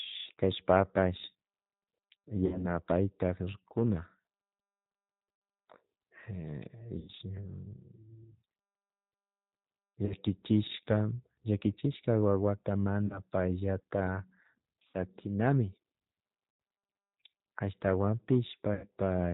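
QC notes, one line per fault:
Throughout: G.729 codec, plainly audible at 8 kbit/s. The decoder rebuilds speech from a vocal-tract filter, a pitch predictor and a few pulses per 5 ms subframe, so nothing above 4 kHz survives and the voice sounds rough and slightly synthetic.
2.46–2.73, 5.36–5.42, 6.99–7.11, 10.06–10.14, 13.07–13.20, 14.91–14.96, 16.51–16.60 and 18.74–18.87 s: VoIP packet loss concealed by the speech codec. Gaps of 30 to 90 ms, fitting one to three lost 30 ms packets, are filled by extrapolating the last pitch and filter with falling gain. Each gap becomes a fading buzzy tone or coloured noise, and the voice stays weak or distorted briefly afterward because each frame builds on the last.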